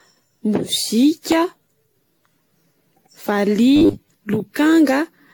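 Throughout, the speech shows generation loss, sounding swirly and hollow with blurred attacks and nothing above 18.7 kHz, likely from around ten AAC-LC re-encodes near 96 kbit/s.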